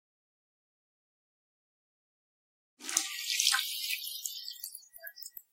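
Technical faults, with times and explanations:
Nothing stood out on listening, and the gentle fade-in that settles by about 3.4 s sounds like an ordinary edit.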